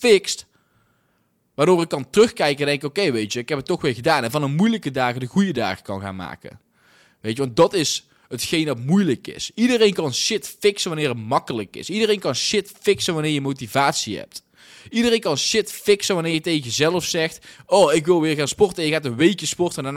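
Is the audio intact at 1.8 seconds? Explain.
Yes, at 1.8 seconds the speech plays through cleanly, with no dropout, click, distortion or other fault to be heard at that moment.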